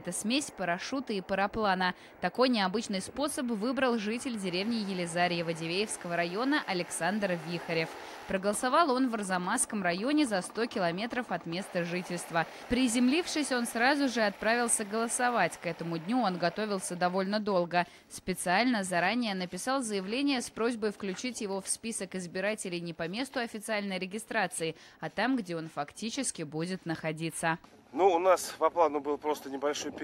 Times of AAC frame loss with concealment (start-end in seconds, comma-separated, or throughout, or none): none